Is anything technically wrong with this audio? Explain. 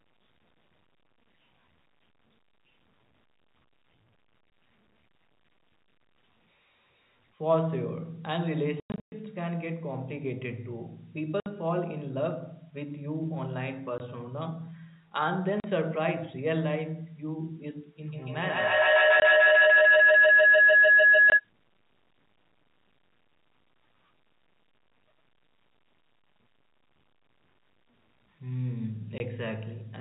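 Yes, there are two faults in this telephone-band speech.

Packet loss filled with silence: the sound drops out abruptly, with hard edges, at 4.5 s, 8.8–9.12 s, 11.4–11.46 s, 13.98 s, 15.6–15.64 s, 19.2 s, 21.3 s and 29.18 s. The worst is 8.8–9.12 s, where about 260 ms goes missing in scattered pieces, the longest 120 ms. Every hole is a multiple of 20 ms, which fits lost 20 ms packets that the receiver replaced with silence.

Feedback howl: from 18.06 to 21.49 s a tone of roughly 1.5 kHz grows until it sits about 11 dB above the speech, with the loop repeating roughly every 150 ms. This is acoustic feedback. A microphone picks up a loudspeaker carrying the same call, and each trip around that loop adds level. The loop's delay sets the pulse rate, and its favoured frequency sets the pitch.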